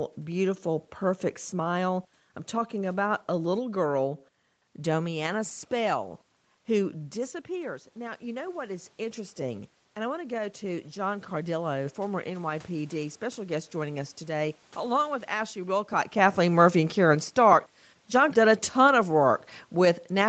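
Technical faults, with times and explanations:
6.93–14.22 s, automatic gain rising: after the talker moves away from the microphone around 7 s, the speech level drops by about 9 dB. The gain control slowly raises its gain by about 8 dB, so voice and room noise swell together until just before "along with".
16.19–20.29 s, automatic gain falling: after the talker's position changes again around 16 s, the speech arrives too loud. The gain control lowers its gain gradually through the end of the clip, so the voice starts hot and then sinks, carrying the room background down with it.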